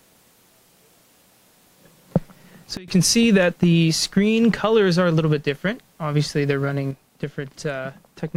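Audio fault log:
2.77–2.88 s, sudden gain jump: a gain change likely applied with no ramp drops the sound and background noise together by about 24 dB, then they snap back.
6.91 s to the end, sudden gain jump: a second gain step, likely unramped, cuts the sound and background noise together by about 6 dB and holds there.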